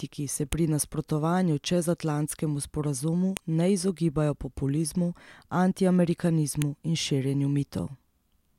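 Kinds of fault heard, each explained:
File header played as audio: the speech is made of separately stored WAV pieces joined end to end, and each piece's header was left in, so its few dozen bytes of metadata play back as sample values. The result is a brief, hard click or snap unrelated to the speech around it. It occurs three times, at 0.53 s just before "pri nasprotovanju", at 3.37 s just before "ne izogibajo", and at 6.62 s, each marking a joint between pieces.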